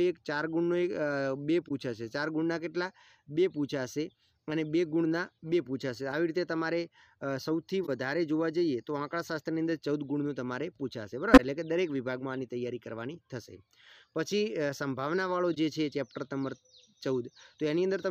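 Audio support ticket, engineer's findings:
Corrupt frame concealed at 1.68–1.71 s, 7.84–7.89 s, 11.33–11.40 s, 15.54–15.57 s: brief, 30–60 ms. AAC decoder detected damaged frames and muted or replaced each with scrambled prior spectrum. Lengths fit one to three frames.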